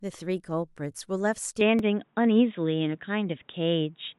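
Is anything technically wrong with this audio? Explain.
Yes, there are two faults, and both start in the first half of the clip.

From 1.61 s to the end, the input is switched to a poorer device. The sound goes dull and boxy in an instant. Nothing remains above 3.8 kHz. The level shifts by about 5 dB. A new noise floor sits about 45 dB below the speech. There is no gap at the change. The likely cause is the system moving to another microphone or a headset's call profile mid-recording.

At 1.79 s there is a repeated buffer. New audio arrived late, so the device played the last block once more. The block lasts 5.33 ms, which fits a 256-sample buffer. The repeat meets the speech at hard joins, so it sounds like a click rather than a stutter. About 5 ms of real audio is lost there.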